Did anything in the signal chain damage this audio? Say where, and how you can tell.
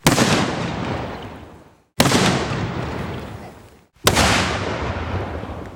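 Yes. At 2.49 s the audio jumps forward. This is compressed frames skipped at the codec stage: about two 20 ms frames, roughly 40 ms of sound, were never decoded.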